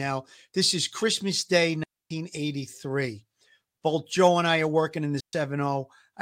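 Speech with two clean holes of near silence, from 1.84 to 2.11 s and from 5.20 to 5.33 s, with no noise burst on either side. These are digital wireless dropouts: the radio link lost too much data, so the receiver muted with a very short fade.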